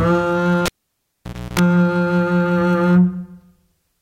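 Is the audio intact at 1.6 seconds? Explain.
No. At 1.6 s the music has only just returned after a cable pulled and plugged in, from 0.66 to 1.59 s. A pop opens about 0.89 s of near silence. A 0.31 s burst of 60 Hz mains buzz follows as only the plug tip makes contact, then a second pop marks reconnection. That buzz between the two pops sets it apart from a plain dropout.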